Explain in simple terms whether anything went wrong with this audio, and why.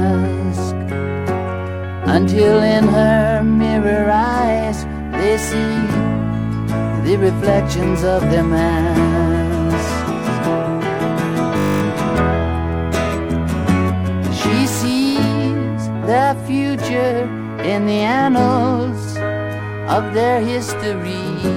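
A brief buzz cuts in from 11.58 to 11.82 s, like a low electric hum replacing the sound for about a quarter of a second. This is a system hang loop: the computer stalled for a moment while the sound hardware kept replaying the last 20 ms snippet it had, 12 times in a row. Repeating that tiny piece 50 times a second is what turns it into a steady buzz. Little or no audio appears to be lost.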